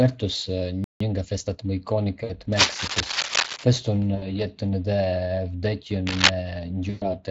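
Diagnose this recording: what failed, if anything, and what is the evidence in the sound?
Speex codec, throughout the whole clip. This is a codec-stage fault. The speech has the hoarse, noisy grain of a CELP coder that is short of bits for its excitation, and the top of the band sounds like shaped hiss rather than real detail. The damage is plainly audible, which points to a setting at roughly 20 kbps. The coder is modelling the voice rather than carrying its waveform, and the roughness is what that approximation leaves behind.

Playback stall, 0.84 to 1.00 s. The speech cuts off mid-flow into about 162 ms of silence and then resumes. This sits at the buffer or driver stage. The likely cause is that the player ran dry or its thread was blocked, so the output had nothing to send until data arrived again.

Time-compressed catch-up, 1.00 to 1.64 s. Right after the gap, the speech runs hurried, at about 1.25 times normal speed, with its pitch unchanged. 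This is playback-stage recovery. The player shortens the backlog that built up during the stall by cutting out small slices and cross-fading across the joins.

VoIP packet loss concealed by the speech codec, at 2.23 to 2.32 s, 4.15 to 4.44 s and 6.89 to 7.13 s. This is a network fault handled by the codec. Speech is missing for about 60, 60 and 120 ms, which fits runs of 20 ms frames. The decoder filled each hole by extending its last pitch and spectral shape at falling gain. That gives a fading sound, and the voice stays weak and smeared for a while after each gap.

Cable scratch noise, 2.52 to 3.64 s and 6.07 to 6.31 s. Dense, uneven bursts of scratchy rustle sit over the sound at roughly 5 dB above it. The first burst lasts about a second, the second is much shorter. This points to the analogue wiring stage. Likely a worn cable, connector or control was being moved, with its contact resistance fluctuating rapidly and injecting the noise.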